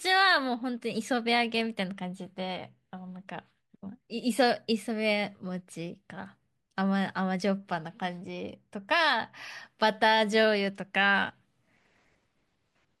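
No technical faults can be heard anywhere in this speech recording. There is nothing in it to place at any point in time.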